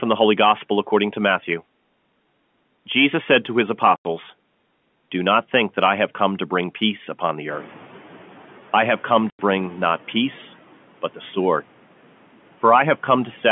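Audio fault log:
3.96 s and 9.30 s: packet loss filled with silence. Each gap lasts 90 ms, which fits three lost 30 ms packets, the first after "said to his", the second between "I have come" and "not peace". The waveform drops to a flat line with square edges, and the spectrogram shows a blank vertical band.
7.50–8.62 s: noise suppressor catching up. Between "bring peace upon the" and "I have come", the room noise jumps by about 16 dB and at first passes through with little reduction. Over 1.12 s the suppressor's estimate catches up and cuts it by about 8 dB. On a spectrogram the broadband floor brightens abruptly, then fades.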